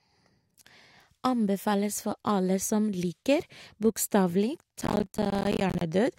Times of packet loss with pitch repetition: none

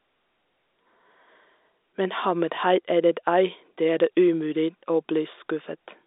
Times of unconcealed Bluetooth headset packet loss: none

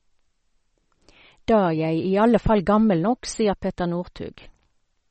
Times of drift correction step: none

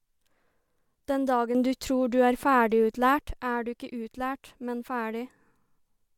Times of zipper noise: none

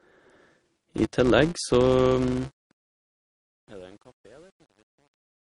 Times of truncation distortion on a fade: 2.18-5.44

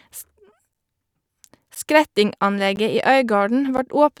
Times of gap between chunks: 0.73, 1.75, 2.76, 3.77

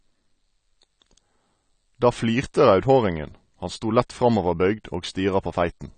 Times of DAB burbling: none

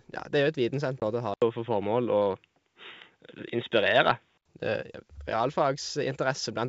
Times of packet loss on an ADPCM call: 1.00-1.04

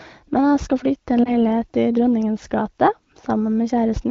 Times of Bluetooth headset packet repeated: none

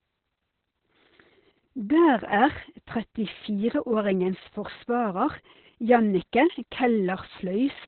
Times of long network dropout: none

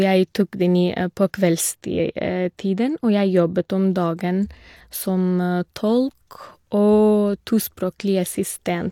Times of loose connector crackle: none

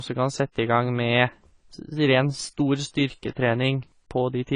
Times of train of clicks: none

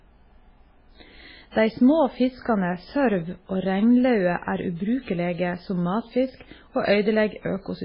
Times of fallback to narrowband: none

